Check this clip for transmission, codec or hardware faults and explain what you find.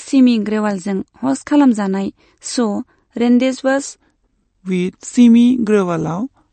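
Two problems stand out in this speech recording. One runs through the whole clip, and the other kicks in partway through.

The whole thing has plainly audible codec damage, most likely MP3 compression. Nothing comes through above about 8.6 kHz, so the top end is cut off flat. The rest has that watery, swirly texture you get when an encoder runs short of bits and drops weaker frequency lines from frame to frame, so they flicker in and out. Sibilants sound metallic, and it fits a low bitrate of around 40 kbps.

From 3.83 s to the end there's a section at the wrong speed. It plays at about 0.857 times normal speed, and pitch drops with it by roughly three semitones, so the voice suddenly sounds deeper and slower. Since speed and pitch shift together, that points to the audio being clocked out at the wrong rate, rather than any deliberate pitch processing.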